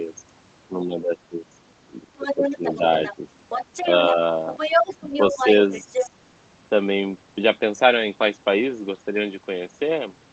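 A speech recording with two echo-control faults. Speech suppressed in double talk occurs at 0.68–1.47 s, 1.82–2.82 s and 5.85–6.13 s. The talker drops by about 15 dB in patches, visible as abrupt notches in the waveform envelope and thinned upper bands on a spectrogram, likely from an echo canceller turning everything down while both sides spoke. The other side's voice leaking through is heard at 2.18–3.15 s, 3.49–4.13 s and 4.49–6.09 s, ranging from about 10 dB below the talker to roughly level with it. A spectrogram shows a second, overlapping set of harmonic striations, likely loudspeaker echo the canceller failed to remove.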